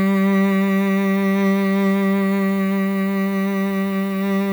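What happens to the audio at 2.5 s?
At 2.5 s the music carries low bit depth with noise shaping, present across the whole clip. The coarse quantisation fits an 8-bit word length. Its rounding error is pushed upward, giving a steady, thin hiss roughly 25 dB below the music that climbs toward the top of the band.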